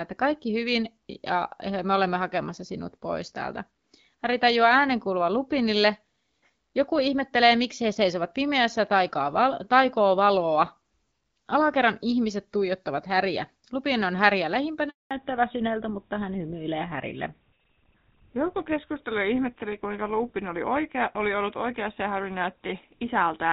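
From 14.89 to 15.11 s there is a handover gap of 220 ms. While the call switched networks, no speech frames arrived, so the sound dies away within tens of milliseconds into dead silence. A single lost packet would be a brief, concealed blip, not this clean hole.

From 15.11 s to the end, a fallback to narrowband follows. The light HD Voice coding, which points to about 12.65 kbit/s, gives way to what sounds like GSM full rate. Nothing above 4 kHz remains, and the speech turns duller and rougher. Unlike a simple low-pass filter, the change starts exactly at the handover.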